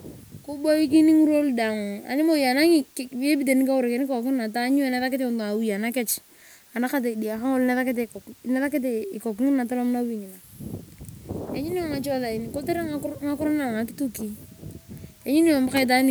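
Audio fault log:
throughout, low bit depth with dither: only 8 bits carry the speech, and dither added before rounding makes the error a constant, even hiss roughly 30 dB below the speech. A spectrogram shows a flat noise floor filling every gap, and the waveform never reaches silence.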